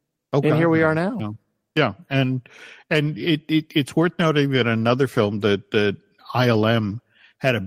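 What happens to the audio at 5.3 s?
Nothing goes wrong at 5.3 s; the audio plays through that moment intact, with no dropout, click, distortion or other fault.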